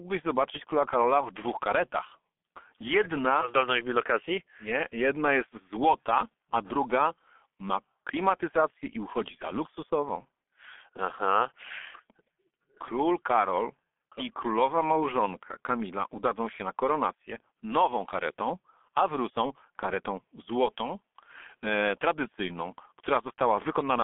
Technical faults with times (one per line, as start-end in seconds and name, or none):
0.00-24.04 G.723.1 codec